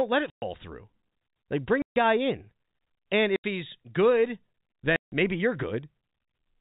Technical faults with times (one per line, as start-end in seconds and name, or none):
0.30-0.42 packet loss filled with silence
1.82-1.96 packet loss filled with silence
3.36-3.44 packet loss filled with silence
4.96-5.12 packet loss filled with silence